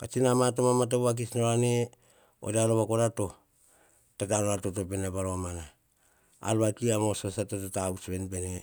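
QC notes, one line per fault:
No technical faults are present in this speech recording.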